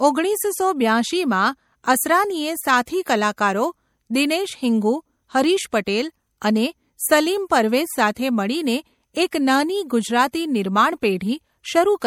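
Right through the speech there's plainly audible swirly, watery smearing, likely MP3 compression at a low bitrate, something like 64 kbps, starving weak frequency lines.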